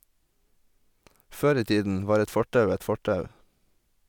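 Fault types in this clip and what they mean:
No technical fault can be heard in this speech recording. There is nothing to list for it.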